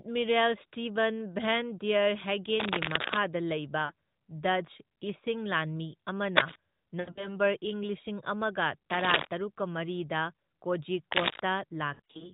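Dense, gritty rustling bursts, louder than the speech itself, sweep across the sound from 2.58 to 3.17 s. This is cable scratch noise, likely from a worn cable or connector being moved so its contact resistance flickers and sprays irregular noise into the signal.

At 3.86 to 3.92 s the speech briefly dips and warbles for about 40 ms. This is lost AMR speech frames: the decoder, missing corrupted frames, repeats its last pitch and vocal-tract settings at falling gain.

The same scratching returns at 6.36 to 6.56 s, just after "ꯏꯁꯤꯡ ꯂꯥꯟꯃꯤ".

From 7.00 to 7.37 s, just before "ꯏꯪ ꯂꯤꯁꯤꯡ", scattered gaps totalling 120 ms make the sound smear and sag, with the longest run about 80 ms. The speech then comes back weak or rough for a moment through the narrowband AMR path.

Scratching bursts recur at 8.90 to 9.27 s and 11.11 to 11.40 s.

A final stretch of frame loss from 11.94 to 12.27 s drops 120 ms in runs of up to 60 ms, leaving a stuttering, fading warble.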